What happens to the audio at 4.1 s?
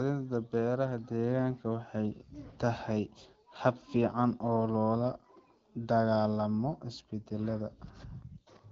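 Nothing goes wrong at 4.1 s: the speech carries on intact through that moment, with only the light trace of the wideband HD Voice coding at 12.65 kbit/s that runs under the whole clip.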